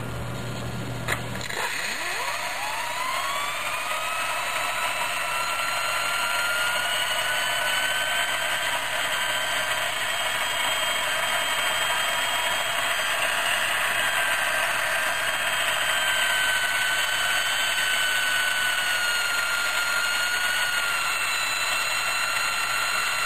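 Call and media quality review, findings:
Filter restarted on every block, whole clip: steady 200 Hz buzz riding under the audio, tracking its level, louder on loud passages and fading in quiet ones. Probable component: a filter stage in the processing chain dropping its state between blocks. Each block starts cold from silence, so every boundary throws a small transient. 200 per second points to roughly 5 ms blocks. Worth checking that filter memory persists across block calls.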